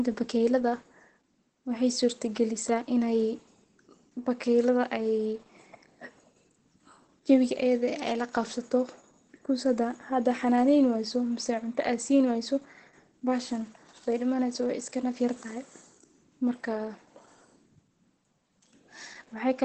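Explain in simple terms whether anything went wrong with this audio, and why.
Opus compression, likely, throughout the whole clip: the speech sounds muffled and hoarse, with nothing above about 8.4 kHz. This fits Opus squeezed hard into its speech mode, which drops the high frequencies and roughens the voice to save data.

Repeated buffer, at 7.59 s: a tiny slice of sound, about 1.45 ms long, was played twice more because fresh audio arrived late. A repeat this short is heard as a click or brief buzz rather than a stutter.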